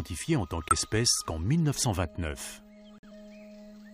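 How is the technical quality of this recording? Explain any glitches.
Two short dropouts mar the recording. At 0.69–0.73 s and 2.98–3.05 s, corrupt frame muted: the decoder rejected damaged compressed frames and silence replaced them, leaving abrupt gaps of about 42 and 66 ms, the second consistent with two frames.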